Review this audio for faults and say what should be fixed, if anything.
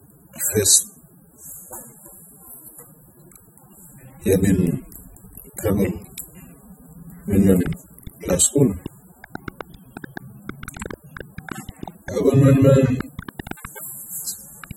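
Throughout the speech there is plainly audible AAC compression damage, most likely from AAC-LC at a low rate; the dull, smeared texture and fizzy warble on sibilants fit a bitrate around 24 kbps, where too few bits force coarse quantisation of each frame's spectrum. On a spectrogram, everything stops at a hard ceiling near 16.5 kHz, with patchy holes and blotchy fill in the upper bands. Encoding from the original at a higher bitrate would prevent it.

From 7.62 s to the end at 14.72 s, a train of clicks rides over the speech and the gaps between phrases: sharp ticks at roughly seven per second, irregularly spaced, around fifty in all, peaking roughly 10 dB above the speech. The likely cause is interference from nearby equipment or a faulty connection or power supply injecting repeated pulses. A waveform shows thin vertical spikes standing above the speech envelope, and a spectrogram shows matching full-height vertical lines. 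Shielding the cabling and checking the connections and power supply would prevent it.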